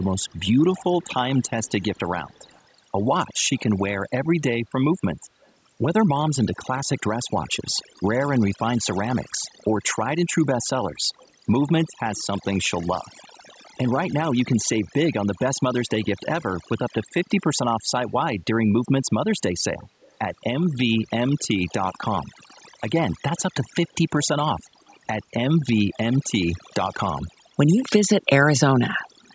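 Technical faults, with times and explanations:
Throughout, overdone noise removal: the background drops and breaks up into twinkling specks. The noise reducer is pulling individual frequency bands down or out whenever they come close to its noise estimate, so quieter parts of the voice vanish along with the noise. Unlike a plain low-pass or the call's normal cut of the lowest bass, the loss flickers band by band over time.
0.0 to 3.6 s, 5.41 to 5.52 s, 7.74 to 8.0 s, 9.57 to 12.44 s, 20.01 to 20.16 s, 22.55 to 22.61 s, 24.23 to 25.96 s and 29.22 to 29.3 s, echo leak: a faint copy of the voice trails about 179 ms behind it, very low, roughly 30 to 40 dB under the speech. It appears in brief scraps and in longer stretches. The likely cause is a far-end loudspeaker whose echo canceller let part of the signal back through. The fixed delay distinguishes it from room reverberation.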